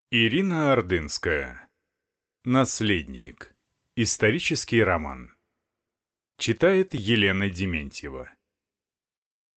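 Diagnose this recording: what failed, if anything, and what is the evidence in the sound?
Call audio freeze at the network and jitter-buffer stage, 3.15 to 3.29 s: the last sound is drawn out as a fading buzz or hiss for 110 ms, then speech resumes intact, 110 ms later than before. Late packets likely emptied the buffer, and concealment filled the wait.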